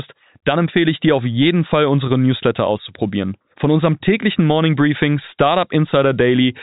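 Nothing's wrong with this speech clip; it's simply carried over an ordinary telephone-style G.711 link, so there's nothing above about 3.8 kHz.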